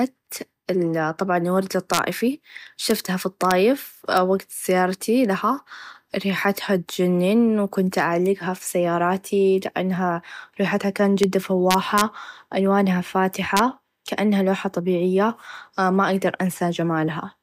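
Integer overflow cracks hit the speech at 1.94–1.99 s, just after "طبعا الورد", then at 2.90, 3.51 and 4.17 s, at 11.24 s after "سياراتي لأنها ريحتها كان", across 11.71–12.01 s, and at 13.57–13.59 s before "كأنها لوحه طبيعيه ما". Peaks only about 1 dB or less over full scale wrap to the opposite sign instead of limiting, producing harsh snaps. The waveform shows full-height sign jumps, and the spectrogram shows bright vertical broadband lines.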